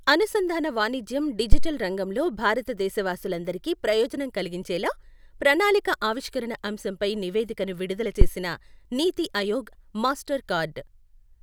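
At 1.52 s, just after "అనుసంధాన వాణిజ్యం", a deep thump hits, peaking at about -2 dBFS and dying away within roughly 50 ms by 1.75 s, before "రంగంలో భారత దేశవాసులందరికీ ప్రయోజనం". A shorter one follows at 8.21 s after "ఆవిష్కరణ అంశంపై నివేదికను విడుదల", reaching about -1 dBFS and decaying in about 21 ms. Both are phantom power thumps: a supply switched on or off on a live input sends a voltage step through the coupling capacitors.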